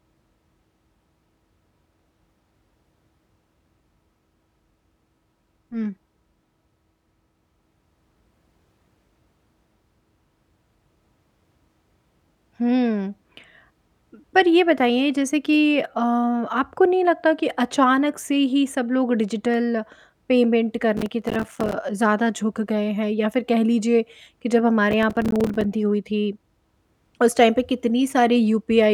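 A processor too busy to fill its small audio buffers on time, each about 5 ms long, drops dozens of them to silence in this speech recording. The result is processor overload crackle, a gritty tearing from 20.97 to 21.73 s and again from 24.91 to 25.73 s.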